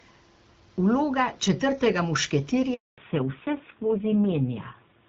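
A speech recording carried over a mobile call, with a handover gap from 2.74 to 2.98 s. As the phone switches networks, no speech frames arrive, so the sound fades within a few tens of milliseconds and stays silent for 240 ms until the new link comes up. Whatever was said in that window is lost. From 2.98 s to the end there is a fallback to narrowband. Before the gap, the audio has the wider HD Voice band with only light coding damage, which fits AMR-WB at 12.65 kbit/s. Afterwards, nothing is left above 4 kHz, and the speech turns duller and rougher, which points to a drop to AMR-NB at around 5.9 kbit/s.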